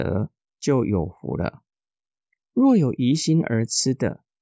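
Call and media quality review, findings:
Nothing to flag on this one; the speech came through with no audible faults anywhere in the clip.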